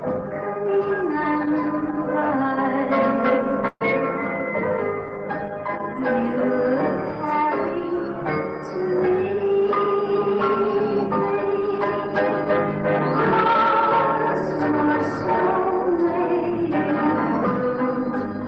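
A call audio freeze at 3.67 to 3.83 s stretches the last sound into a short fading fill of about 132 ms that ends in roughly 50 ms of silence, after which the audio resumes where it stopped with nothing lost. The likely cause is delayed packets draining the jitter buffer, adding 132 ms of delay. From 9.09 to 12.24 s a jitter buffer speed-up runs the audio at 103% speed without changing pitch, as the receiver trims repeated pitch-period slices, about a tenth of a second in total, to bring the delay back down. Throughout, the Opus call path's coding noise and 12 kHz top end are audible, consistent with a bitrate around 20 kbps.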